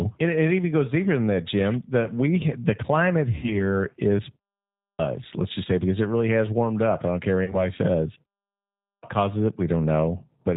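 The whole clip of speech carries the sound of the G.729 codec, here most likely the G.729A variant at 8 kbit/s, and its damage is plainly audible. The decoder rebuilds each 10 ms frame from a vocal tract filter, a pitch predictor and a few pulses, so nothing above 4 kHz survives and the voice comes across rough and slightly synthetic.

From 3.35 to 3.61 s there is VoIP packet loss concealed by the speech codec. About 80 ms of audio is missing, which fits four 20 ms packets. The decoder fills the gap by repeating its last pitch and filter at falling gain, so the sound is stretched into a buzzy tone or coloured noise that fades. Because each frame is predicted from the one before, the voice stays weak and distorted past the gap until the decoder state recovers. A shorter instance of the same fault runs from 7.44 to 7.63 s, with about 40 ms lost, consistent with two packets.

At 4.74 s, after a 0.44 s pause, there is a clipped start after a pause. 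The output path had gone idle and took roughly a quarter of a second to come back, so about 250 ms is swallowed and the speech resumes abruptly at 4.99 s without its opening sounds. The same fault recurs at 8.77 s after a 0.61 s pause, cutting about 257 ms, and the audio returns at 9.03 s. The muted pauses before both events drop to silence, as expected.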